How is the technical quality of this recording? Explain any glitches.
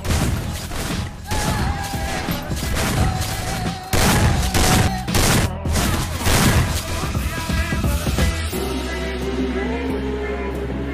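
The recording has two brief pitch-and-speed lurches, a drift correction step. From 4.27 to 4.88 s the sound drops about a semitone (113 cents, 6.3% slower), and from 9.72 s to the end it jumps about a semitone sharp (6.3% faster). This likely comes from clock-matching software abruptly changing the playback rate to rebalance its buffer.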